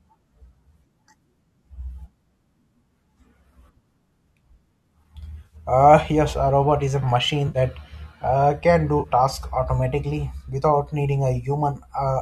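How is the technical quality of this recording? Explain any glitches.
The speech is carrying a light low-delay codec texture, likely AAC-ELD at around 64 kbps, and there are three short dropouts where AAC frame loss with concealment kicks in. They land at 5.46 to 5.56 s, 7.48 to 7.58 s, and 8.99 to 9.07 s. Each lasts about a tenth of a second or less. The first two run 60 ms, which fits six 10 ms low-delay frames, and the last runs 40 ms, which fits four. At each gap the decoder has nothing new to work with, so it keeps re-using the last good spectrum and roughens it up to hide the hole. What you hear is a brief smeared, noisy or phasey blip rather than a clean silence, and then the speech continues.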